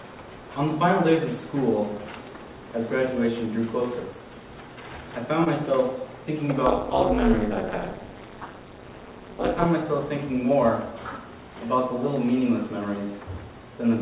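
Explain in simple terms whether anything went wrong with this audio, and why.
Two things went wrong. At 5.44 to 5.48 s there is a short concealed packet loss: about 20 ms of the call arrived too late, so the receiver continued the preceding sound to cover the gap and then blended back in. It is a single brief smear or wobble, unlike a click or a hard dropout of silence.

From 6.66 to 9.66 s there is overlap-add ripple. The audio was chopped into short overlapping pieces and rejoined with uneven volume, so the level pulses about 200 times a second. That adds a metallic buzz over a steady stretch, rather than a one-off glitch. The call path cuts everything above 4 kHz, which makes the sound a bit muffled, but that is normal for this kind of phone-line connection.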